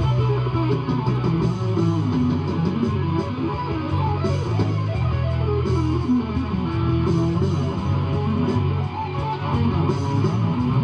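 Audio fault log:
Nothing here to log, since no faults turned up anywhere in this clip.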